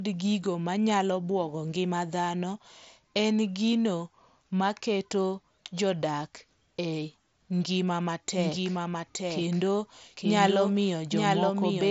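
Speech carried over a Bluetooth mSBC headset link, with nothing above about 7.7 kHz. A doubled audio track, likely from a second, slower capture path, sets in abruptly at 8.37 s: a dry, full-band copy about a second behind and a few dB quieter runs to the end.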